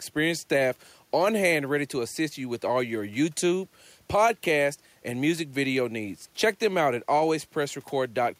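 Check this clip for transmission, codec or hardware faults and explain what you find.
Nothing in the speech recording points to a transmission, codec or hardware fault. No problem turns up anywhere in the audio.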